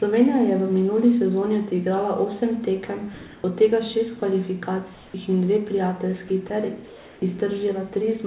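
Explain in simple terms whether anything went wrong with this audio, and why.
In the pauses, the call system likely stopped sending the real background and played comfort noise in its place. So after "sezoni odigrala osem tekem" (3.14 to 3.44 s), before "in dve prijateljski ter" (4.94 to 5.14 s), and after it (6.86 to 7.22 s), the room sound turns flat and featureless.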